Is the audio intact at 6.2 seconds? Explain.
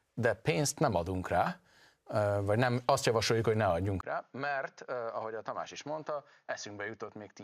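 No. From 4.01 s, right after "azt javasoljuk hogy ne", there's a 20 ms gap, then the speech turns dull and boxy, with nothing above 6.7 kHz, roughly 10 dB quieter, and a new noise floor underneath. That's likely an input switched to a poorer device, and it lasts to the end.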